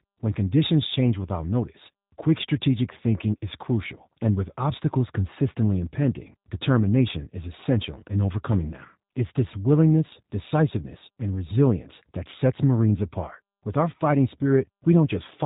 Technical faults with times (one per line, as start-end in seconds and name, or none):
0.00-15.45 G.729 codec